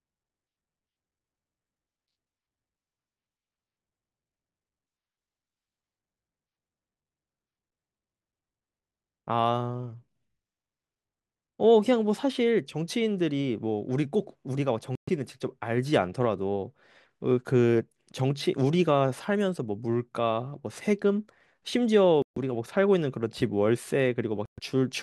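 Bluetooth stalls at 14.95, 22.22 and 24.46 s cut the speech to silence for 122, 142 and 122 ms before it resumes. The likely cause is interference delaying packets until the headphones' buffer ran empty, pausing playback until retransmissions arrived.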